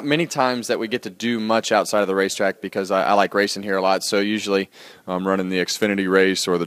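From 4.92 s to 6.66 s, a drift correction step likely occurred: clock-matching software lowered the playback rate in a single jump to rebalance its buffer. The audio slows by 5.5% and drops about 98 cents, nearly a semitone, staying detuned to the end.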